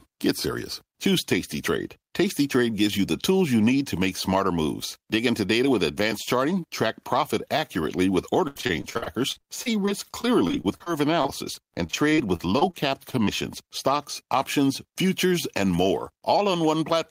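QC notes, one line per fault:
8.47–12.75 s, repeated packet loss (robotic sound): after "track profit accurately with", 32 gaps patched by extending prior audio, about 640 ms lost, longest 79 ms, so choppy with pieces missing.
13.11 s, short stall from a late packet: jitter buffer ran dry for 18 ms, last sound held until the packet arrived, giving a brief drawn-out buzz, nothing lost.
13.25 s, short concealed packet loss: about 20 ms never arrived, the gap filled by continuing the preceding sound, heard as a quick smear or wobble.
14.27–15.70 s, jitter buffer speed-up: overfull buffer trimmed by cutting short pitch-period pieces, roughly 70 ms in all, so speech runs about 5% faster at unchanged pitch, slightly hurried.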